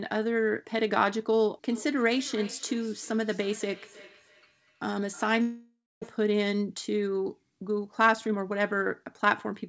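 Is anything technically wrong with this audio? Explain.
Yes. From 1.72 to 6.30 s, speech comes back thinly about every third of a second, peaking about 20 dB down: feedback echo between two devices, each microphone recapturing the other's playback. From 5.42 to 6.04 s, sound smears into a fading buzz, then about 240 ms of silence, and roughly 400 ms never returns, likely a long network dropout. From 7.87 to 9.64 s, speech runs about 8% fast at unchanged pitch, a jitter buffer speed-up trimming roughly 150 ms of pitch periods. The call codec, consistent with G.722, leaves nothing above 8 kHz.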